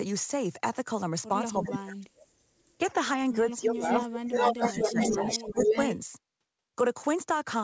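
A speech recording carried over a call link, with nothing above 8 kHz, which fits a wideband codec such as G.722 at 64 kbps. Speech suppressed in double talk appears twice. From 1.55 to 2.39 s the level collapses by roughly 35 dB, and from 2.78 to 5.86 s it dips by about 15 dB, most likely because an echo canceller, facing simultaneous talkers, attenuated the near side along with the echo. Echo leak overlaps this. A copy of the speech delayed by 0.43 s surfaces from 3.84 to 4.08 s at about 5 dB below the direct sound, then from 4.26 to 5.97 s at roughly equal level. It is likely the far end's loudspeaker pickup passing through incompletely cancelled and returning down the line.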